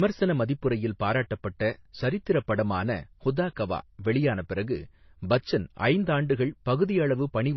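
Speech throughout, with nothing audible above about 5.9 kHz and two layers of compression damage heard together: a smeared, swirly low-bitrate MP3 texture plus HE-AAC's metallic, synthetic top. This most likely reflects transcoding between lossy codecs, a roughly 24 kbit/s MP3 re-encoded to 32 kbit/s HE-AAC.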